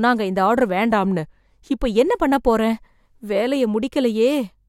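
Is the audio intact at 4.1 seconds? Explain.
Yes, the speech at 4.1 seconds plays through without any dropout, glitch or other audible fault.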